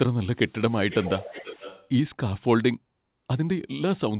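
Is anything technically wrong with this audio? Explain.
Yes. From 0.7 to 1.88 s there is an echo leak: a delayed copy of the speech, roughly 0.4 s late and well below it. The likely cause is a far-end loudspeaker whose echo canceller let its microphone pickup return.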